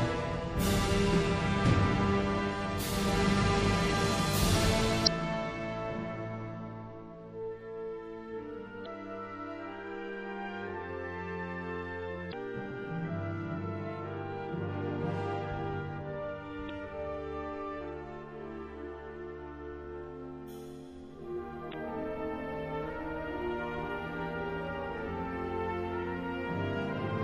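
Across the whole clip the sound is watery and swirly. The top end is dulled, as if cut off above a fixed point. Faint detail flickers in and out between moments. Transients lose their edge and smear. This is plainly audible codec damage, most likely from MP3 compression at a low bitrate, which fits something near 64 kbps. With too few bits, the encoder discards the treble and drops weaker frequency components. Those components then come and go, which gives the swirling texture.

Five short bursts of damaged data in a compressed stream occur, each lasting about 44 ms. They fall at 5.03 to 5.08 s, 8.82 to 8.86 s, 12.29 to 12.34 s, 16.66 to 16.70 s and 21.70 to 21.74 s. Each is heard as a brief chirp or blip. At these points part of the encoded data is corrupt. The decoder misreads the affected frames, loses its place and has to find the next valid frame before playback steadies again.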